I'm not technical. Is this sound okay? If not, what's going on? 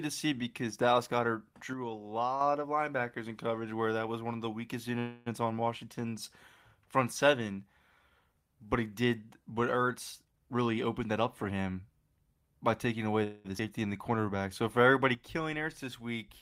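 No, this speech has several problems that sound like an internet call struggling.

From 1.73 to 2.41 s, just before "of linebackers in coverage", the volume drops suddenly and then comes back. That is a one channel drops out fault. The recording likely had two matching channels, left and right, and one went missing for a moment, so when they are combined there is simply less sound. The same drop happens again from 15.15 s to the end, and this time the level stays lower.

Twice the sound hangs for a moment. Right after "one of the weakest", from 4.99 to 5.28 s, and right after "by taking away", from 13.23 to 13.47 s, you hear a call audio freeze. These pauses are about a quarter of a second and about a fifth of a second long. The last bit of sound is stretched into a fading buzz or hiss while the player waits, likely because pieces of the call arrived late. When they show up, the speech carries on from where it stopped, so nothing is lost. 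It just starts later.

From 10.24 to 11.73 s the talking runs hurried but keeps the same pitch. This is a jitter buffer speed-up. The player had built up too much waiting audio and caught up by trimming many tiny slices out of the speech, adding up to roughly a third of a second. The result plays at about 117% speed.

At 13.59 s there is a skip ahead. Roughly 70 milliseconds of speech is dropped, so the audio jumps straight to what comes next with almost no gap, and a short piece of a sound goes missing.

From 13.79 to 14.43 s the opposite happens, a jitter buffer slow-down. The player was running short of audio, so it repeated tiny pieces of the speech to build a reserve. That adds 77 milliseconds, and the talking plays at about 89% speed with stretched-out sounds, again without changing pitch.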